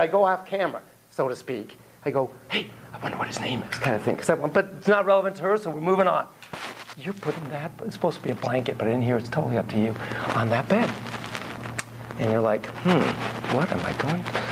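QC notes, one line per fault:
Nothing stood out on listening.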